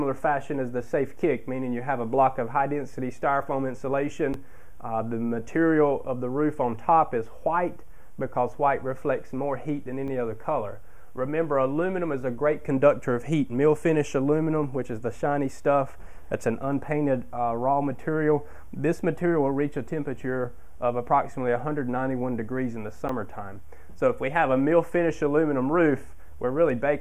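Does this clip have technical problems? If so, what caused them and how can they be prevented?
Yes. An underrun with held sample occurs at 4.33, 10.08 and 23.08 s. Each time, the output buffer ran dry and the converter held its last value, flattening the waveform for 10.67, 4.12 and 10.67 ms. The longer gaps fit a 512-sample buffer. Around 10, 4 and 10 ms of audio were lost. Larger buffers or higher playback-thread priority would prevent this.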